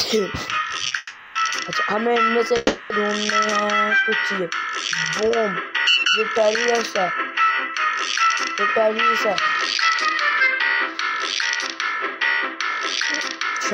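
At 0.87 s the sound hangs for about 40 ms, then carries on from exactly where it stopped. This is a short stall from a late packet: the jitter buffer ran dry, and the receiver stretched the last fragment until the packet turned up. Nothing is lost, but timing slips by 40 ms. Compared with a freeze, the hold is brief and sounds like one drawn-out sound with a faint buzz or dip rather than a gap.

Two call audio freezes follow, from 0.97 to 1.37 s and from 2.57 to 2.92 s, lasting about 380 ms and 330 ms. In each the last sound is carried on as a fading buzzy hiss that never drops to silence. The audio then resumes where it left off with nothing missing, now running later. The likely cause is packets held up in transit emptying the jitter buffer. These are roughly eight to ten times longer than the stall and smear into decaying noise instead of a held tone.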